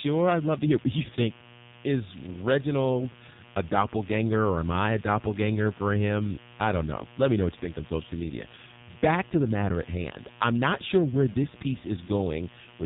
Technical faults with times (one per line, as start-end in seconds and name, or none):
0.00-12.85 mains buzz
0.00-12.85 AMR narrowband mobile codec
11.32-11.35 lost AMR speech frames